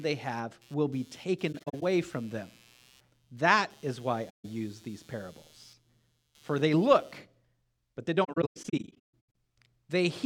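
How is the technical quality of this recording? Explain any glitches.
The recording has two problems: an electrical interference noise during the first part, and three stretches where the audio drops out.

Computer activity noise runs from 0 to 7.18 s. Processor or peripheral load disturbs the shared audio ground, so a buzzy, chirping layer pulses at around 150 Hz, roughly 30 dB below the speech.

AAC frame loss with muting occurs at 1.52 to 1.82 s, 4.29 to 4.45 s, and 8.24 to 9.02 s, just after "but they". The decoder lost coded frames and zeroed their spectrum. Because the overlapping windows fade each gap in and out, you hear soft-edged holes.

The first dropout removes about 150 ms of audio in short scattered gaps across 0.3 s. The second removes about 150 ms. The third removes about 660 ms spread over 1.1 s, with the longest hole lasting roughly 150 ms.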